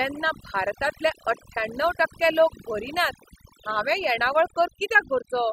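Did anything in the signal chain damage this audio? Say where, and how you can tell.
Yes. Overdone noise removal runs throughout, at the call-processing stage. A noise suppressor set far too aggressively drops individual frequency bands near its noise estimate, so the background collapses to near silence with twinkling specks.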